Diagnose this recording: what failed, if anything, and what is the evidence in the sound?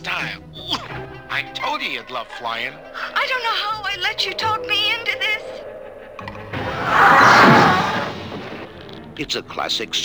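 Sample clock jitter runs throughout the recording, and it sits at the converter stage. The evidence is a grainy hiss riding on the sound itself: it thickens on loud passages and on bright, high-frequency content, and disappears whenever the sound falls silent. The converter's clock is wandering by a couple of microseconds, so each sample is taken slightly off time, and the steeper the waveform, the bigger the resulting error, roughly 35 dB below the signal.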